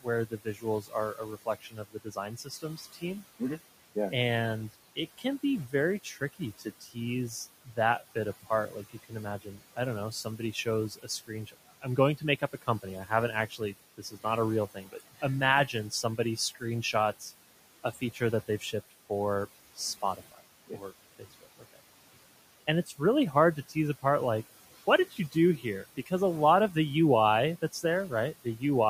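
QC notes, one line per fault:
throughout, noise suppressor artifacts: The background noise dips in the gaps between phrases and swells back up beneath the speech. A suppressor is treating the steady room noise, sitting about 17 dB under the speech, as something to remove, pulling those bands down by about 16 dB frame by frame. It releases them whenever speech arrives, so the noise floor pumps.
0.01–3.41 s, 4.96–6.97 s, 7.65–17.23 s, 17.83–19.10 s, 19.76–21.80 s, 22.67–24.04 s (ending just before "like what"), 25.11–26.11 s (between "like what" and "a lot of the"), 27.72–28.62 s, speech cut by the noise suppressor: Soft consonants and word endings sound swallowed. The suppressor is mistaking low-level speech for noise and attenuating it by about 12 to 19 dB, deepest in the first span. The losses add up to roughly 1.5 s in the first span and 2 s in the third, and only a fraction of a second in each of the others.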